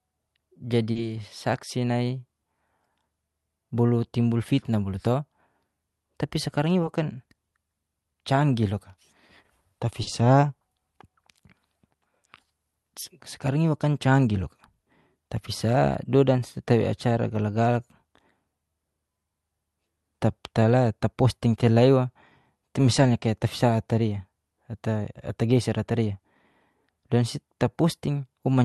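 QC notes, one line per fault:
0.91–0.97 s and 10.03–10.09 s, short stall from a late packet: at each point a packet arrived late, the jitter buffer ran dry, and the receiver stretched the last sound by 40 ms to bridge the gap before resuming where it left off. Nothing is skipped, but a sound is held unnaturally long, with a slight buzz or dip, and the playout delay grows by 40 ms each time.
6.47–6.75 s (112% speed) and 21.05–21.47 s (107% speed), jitter buffer speed-up: the buffer had built up more audio than its target after the earlier stalls, so the receiver trimmed short pitch-period slices in quick succession, removing roughly 40 ms in each stretch. Pitch stays the same, but the speech briefly runs faster and sounds hurried, more noticeably in the first stretch. Through the whole clip the Opus path's 12 kHz band limit can be heard.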